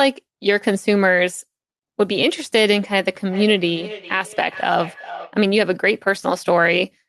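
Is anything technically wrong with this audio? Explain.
Yes. From 3.28 s to 5.39 s there is feedback echo between two devices. Two endpoints in the same room are on the call, and one device's speaker output is picked up again by the other's microphone. Each echo canceller removes only its own playback, so the returned signal passes straight through. The speech comes back roughly every 400 ms, peaking at about 16 dB below the direct speech, with each repeat thinner and more ringing than the last.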